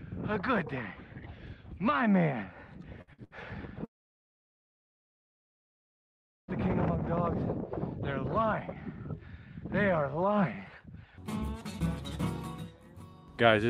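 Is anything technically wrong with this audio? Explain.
Yes, there are two kinds of fault.

Bursts of packet loss occur at 3.01 to 3.10 s, 3.13 to 3.21 s and 3.24 to 3.34 s. Each time a run of audio failed to arrive, the receiver stretched the last sound into a brief fading buzz or hiss, then resumed with about 60 ms skipped.

A long network dropout, likely the cause, runs from 3.85 to 6.51 s. The last sound is extended only momentarily before giving way to about 2.6 s of silence, and the audio returns with roughly that stretch missing.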